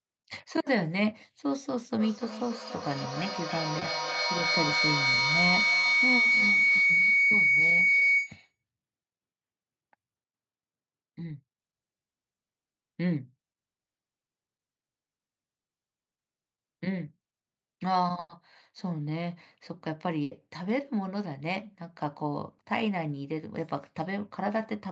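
From 2.0 to 8.62 s there's a feedback howl. Two devices on the call are sharing a room, and each trip round the mic-to-speaker loop adds gain, so the sound narrows into a whine around 2 kHz. It pulses roughly every third of a second and peaks about 5 dB above the speech.

Buried inside that howl are three bits of short concealed packet loss, at 3.79 to 3.83 s, 5.81 to 5.85 s and 7.99 to 8.03 s. Each time, about 20 ms of audio didn't arrive and the decoder patched it by carrying the last sound forward, so you get a quick smear or wobble.

Later there are two bursts of packet loss. At 18.19 to 18.31 s about 100 ms is gone. The receiver stretches the last sound into a held, fading buzz or hiss, with about 20 ms of outright silence before the speech picks up further on. At 20.23 to 20.33 s another 80 ms drops out the same way, and the audio resumes with that stretch missing. All of this sits within the call's 8 kHz bandwidth.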